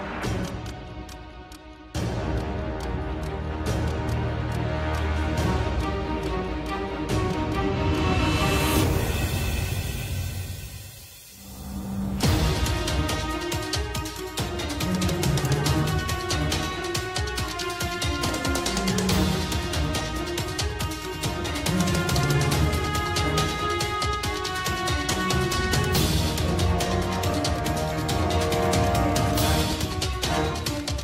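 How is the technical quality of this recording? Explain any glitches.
No glitches turn up here at all, just a steady, uninterrupted recording with nothing jumping out to explain.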